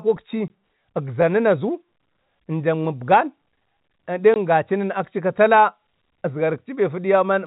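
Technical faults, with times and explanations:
0.48–0.50 s and 4.34–4.36 s: packet loss filled with silence. Each gap lasts 20 ms, which fits a single lost 20 ms packet. The receiver played digital silence in its place, so the audio drops out abruptly with hard edges against the narrowband G.711 telephone sound.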